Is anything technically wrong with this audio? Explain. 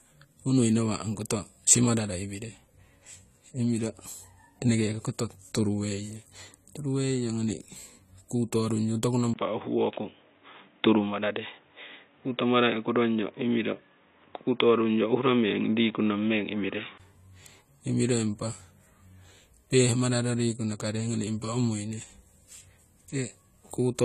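Yes, there are two problems.

Across the whole speech clip there is a dull, smeared quality, with a watery, fizzy edge on sibilants and sustained sounds, and nothing comes through above 14.1 kHz. That points to AAC compression, likely AAC-LC at a low bitrate, plainly audible here and consistent with around 32 kbps. With so few bits, the encoder lowers the cut-off and coarsely quantises the remaining frequency lines, leaving gaps that warble and smear.

From 9.34 s to 17.00 s the sound suddenly turns narrow and boxy, with everything above 3.8 kHz gone. A brief silence of about 20 ms marks the change, and a new noise floor appears about 40 dB below the signal, while loudness stays roughly the same. This is most consistent with the input being switched to a poorer device, such as a headset call profile, whose narrower band and own background noise replace the original microphone until 17.00 s.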